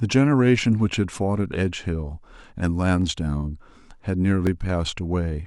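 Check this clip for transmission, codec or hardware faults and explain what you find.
There are two small hardware-side glitches in the speech, both the same kind. A repeated buffer shows up at 1.12 s and again at 4.47 s. Each time, audio arrived late and the device replayed its last 1.45 ms chunk once more, which fits a 64-sample buffer. That's too short to hear as a stutter, so it comes across as a quick click or brief buzz, with essentially nothing lost.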